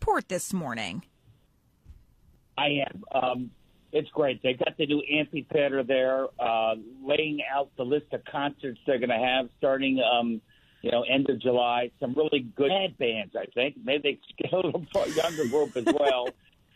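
At about 12.65 s, running to 12.70 s, the audio suddenly jumps forward with a short blip of roughly 50 ms, and what follows doesn't carry on from what came before. That's most likely a stream segment skipped: one chunk of the segmented stream failed to arrive, and the player just moved on to the next one. The join lands wherever the gap happens to fall, so you get that abrupt lurch and small click.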